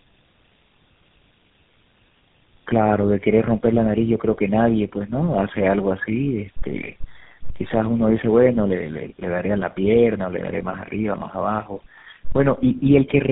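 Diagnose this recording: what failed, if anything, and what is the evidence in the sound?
Tandem speech coding at the codec stage: throughout, the speech is rough, muffled and warbly, with nothing above 3.7 kHz. That fits about three low-rate coders in series, such as AMR and GSM full rate, each re-encoding the previous one's damage. The degradation is heavier than any single codec would cause.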